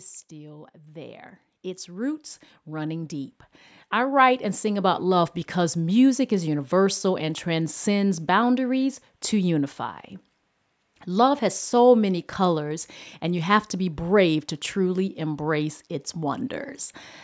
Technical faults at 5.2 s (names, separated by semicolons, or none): automatic gain rising